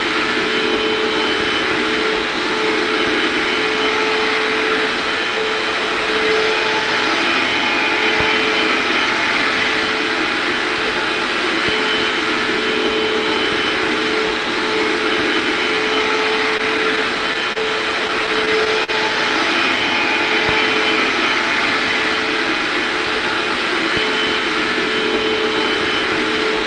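Packets arriving late kept draining the jitter buffer at 16.57 to 17.57 s and again at 18.07 to 18.90 s. This produces repeated stalls (stutter), where short stretched fills of up to 41 ms make the sound drag and hiccup.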